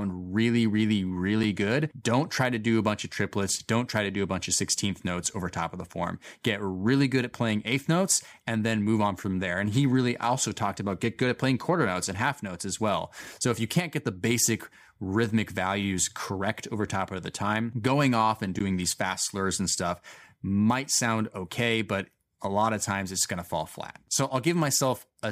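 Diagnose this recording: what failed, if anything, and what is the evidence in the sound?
A block of digital silence at about 18.59 s in this speech: roughly 13 ms of samples simply drop out to silence, with hard edges that give a quick tick. That points to the driver or buffer stage, where the output buffer wasn't filled in time and got zeros instead.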